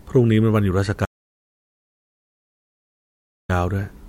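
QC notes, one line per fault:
1.05–3.49 s, audio dropout to silence: the speech cuts out mid-flow for about 2.4 s of dead silence, no room tone, likely a lost input link or mute.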